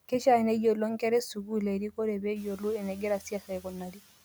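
Speech cut by the noise suppressor at 1.35–1.52 s, after "neyiolo nkera e", and across 2.2–4.0 s: speech dips about 11–12 dB along with the background, sounding swallowed rather than silent, while room noise rises near 2.5 s.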